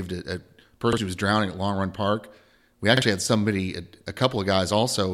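A speech recording with two repeated-buffer stutters. After "a a", at 0.93 to 0.98 s, and just before "had somebody", at 2.97 to 3.02 s, a roughly 46 ms piece plays twice, which fits a 2048-sample buffer replayed when fresh audio arrived late. Each repeat skips about 50 ms of the speech. On a waveform the same block appears twice with a hard seam, and a spectrogram shows a duplicated slice bounded by vertical broadband click lines.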